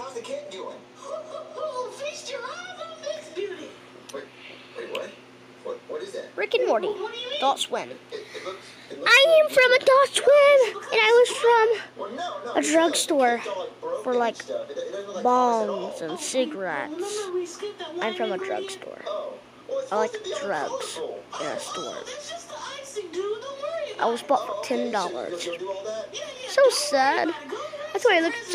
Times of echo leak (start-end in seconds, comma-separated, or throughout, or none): none